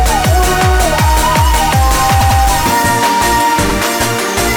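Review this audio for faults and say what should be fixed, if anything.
Repeated frames stutter the audio at 2.20–2.39 s, where a 96 ms block plays twice more (adding 192 ms), and at 3.69–3.73 s, where a 48 ms block repeats once. A spectrogram shows identical adjacent slices. Writing or transmitting each compressed frame exactly once, with sequence checks that drop duplicates before decoding, would prevent this.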